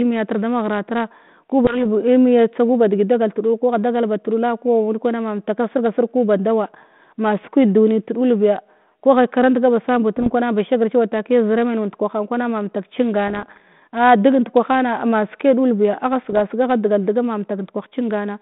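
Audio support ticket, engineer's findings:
Bit errors on the ADPCM link: flipped bits on the G.726 stream, rate well under 1 percent, each one knocking the decoder's step size and predictor off track. Heard as pops and rough bursts with brief level jumps at 1.64–1.80 s, 10.17–10.32 s, 13.28–13.60 s, 16.23–16.41 s, within the narrow telephone band.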